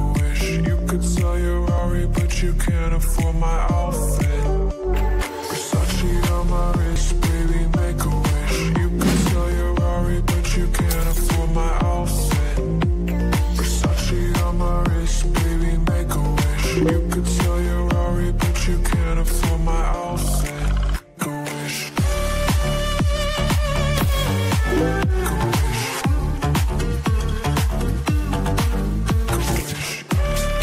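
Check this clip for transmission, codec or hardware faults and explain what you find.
One fault stands out. At 6.96 s there is a sudden jump in the sound. This is likely a dropped buffer (overrun). Samples were overwritten before being read, so about 20 ms vanished. The surrounding audio joins directly, with no gap of silence.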